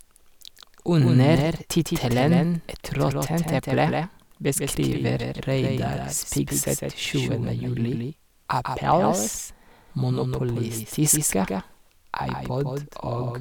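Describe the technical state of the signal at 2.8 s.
At 2.8 s, as throughout the clip, the speech is doubled: a second full-band copy lags roughly 150 ms and sits a few dB quieter, likely an out-of-step duplicate path. It has no decay or room colour, unlike echo.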